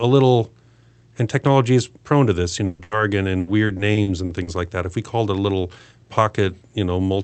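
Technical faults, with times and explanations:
2.65–2.81 s and 2.83–2.93 s, burst of packet loss: About 140 ms, then 80 ms, of speech went missing. Each gap is bridged by stretching and fading the last sound before the speech resumes further on.
3.39–4.49 s, repeated packet loss (robotic sound): Seven short gaps, the longest 80 ms, are each patched by continuing the previous sound. About a quarter of this stretch is filled in, so the speech turns choppy and robotic.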